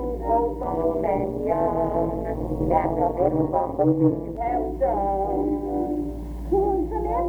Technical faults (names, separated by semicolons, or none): overlap-add ripple